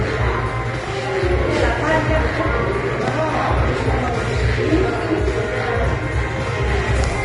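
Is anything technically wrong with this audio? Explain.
Yes. Throughout, the audio has nothing above about 10.6 kHz and a grainy, hissy treble with roughened tones and smeared attacks, likely Vorbis compression at a low rate, perhaps around 30 kbps. The coder's coarse residue turns fine detail into noise; a simple low-pass filter would leave the remaining treble clean.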